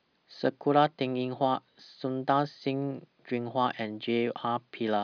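No technical faults are audible anywhere in the recording.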